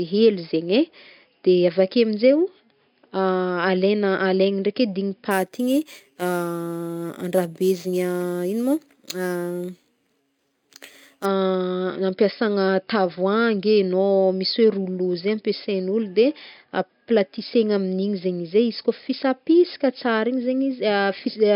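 This speech clip takes on a bright, metallic fizz from 5.31 to 11.26 s. The fizz rises and falls with the speech and sits about 21 dB below it. Its lowest band, between roughly 5.5 and 11 kHz, shifts opposite to the pitch. This is imaging from sample-and-hold upsampling: each sample was simply repeated to reach 48 kHz with no smoothing filter, leaving mirrored copies of the spectrum around multiples of an original rate near 11 kHz.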